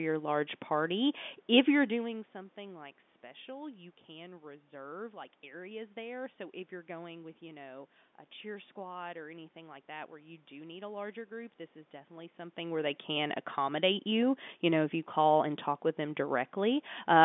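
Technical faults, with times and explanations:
No technical fault can be heard: the speech carries the narrow telephone-line band of G.711 coding, roughly 200 Hz to 3.6 kHz, over room noise, and the level shifts near 1.5 s and 12.5 s come from the talker moving relative to the microphone rather than from the system.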